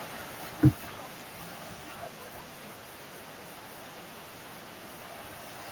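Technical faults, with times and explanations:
0.05 to 1.49 s, automatic gain falling: The speech starts loud, then sinks steadily by about 4 dB over roughly a second and a half. The automatic gain control judged the incoming level too high, or its background noise too strong for its starting gain. It lowered its gain in a slow ramp rather than a jump. Because the gain acts on the whole signal, the background noise drops along with the speech. That shared fade is what marks it as a gain change, not a quieter talker.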